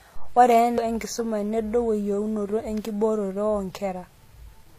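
It's a short speech clip with two problems. Throughout, it carries the mixed artefacts of more than one lossy codec stacked together, with nothing above 14.8 kHz. That points to transcoding between lossy codecs, likely a WMA encode later squeezed through low-rate HE-AAC, each pass adding its own damage on top of the last. At 0.77 s there's a CD skip: a tick, a barely-there mute, and then the playback carries on from a different spot on the disc as the laser jumps to another turn of the spiral.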